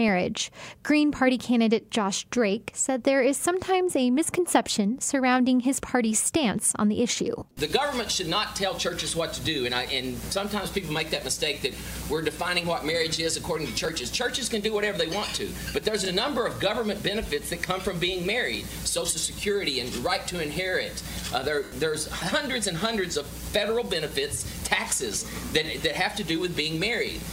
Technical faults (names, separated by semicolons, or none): lost LE Audio frames